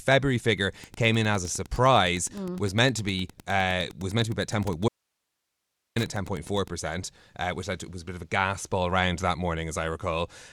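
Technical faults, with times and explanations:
0.81–6.74 s, Wi-Fi interference: A steady ticking sits under the speech at just under ten clicks a second, well below the speech level at roughly 25 dB down. Each tick is a beacon from a nearby Wi-Fi radio, repeating every 102.4 ms. The audio circuit picks up that RF burst and rectifies it into an audible pulse. The ticking lasts almost six seconds.
4.88–5.96 s, audio dropout to a faint residue: The speech cuts out mid-flow and comes back just as suddenly after about 1.08 s. The gap holds only a very faint hiss, roughly 55 dB below the speech. The break is hard-edged, with no fade either way, so it is not a natural pause. The likely cause is that the incoming signal was lost while the later stages of the path stayed live and passed their own noise through.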